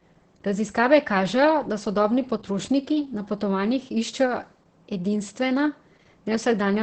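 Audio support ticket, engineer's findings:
Opus voice compression, whole clip. Speech muffled, hoarse, faintly robotic. Heavy damage. Band stops at 8.6 kHz, so wideband. Component: encoder. Sounds like SILK linear prediction with coarsely coded excitation. Fits a starved bitrate near 10 kbps with 20 ms frames.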